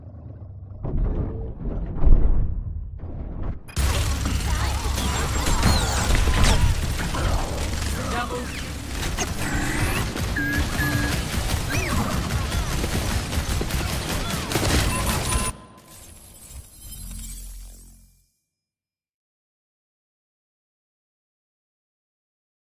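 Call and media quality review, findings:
Nothing to flag on this one: no dropouts, glitches or level problems turned up anywhere in the clip, so there's no fault to chase.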